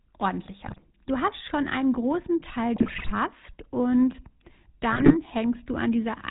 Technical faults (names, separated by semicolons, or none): GSM full-rate codec; GSM bit errors